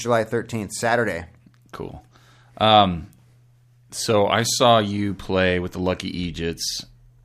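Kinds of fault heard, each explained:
No faults detected anywhere in this speech recording.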